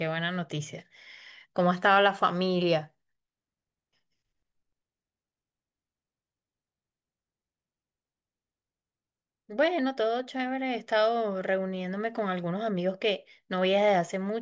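Nothing in this speech recording jumps out as a technical fault, so there's nothing to flag here.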